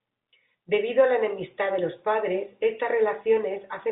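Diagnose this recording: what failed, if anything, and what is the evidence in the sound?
Nothing failed; telephone-band speech, with nothing above 3.8 kHz.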